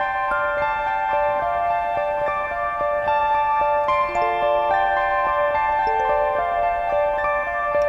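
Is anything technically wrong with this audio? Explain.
No, there is nothing technically wrong with this audio.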